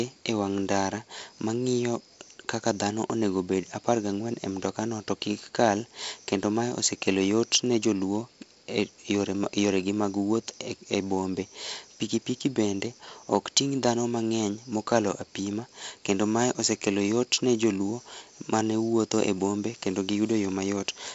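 No technical faults can be heard in this speech. It comes over a G.722 wideband telephone path at 48 kbit/s, so nothing sits above about 7.7 kHz, and the reduced bit budget leaves a light grain and hiss in the coded bands.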